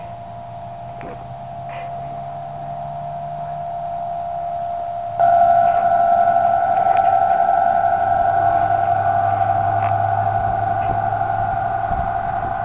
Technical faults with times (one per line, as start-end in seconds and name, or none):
none